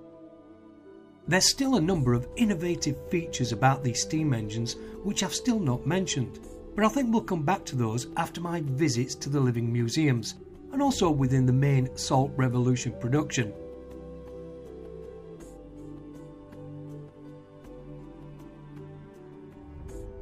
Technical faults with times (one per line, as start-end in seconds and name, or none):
none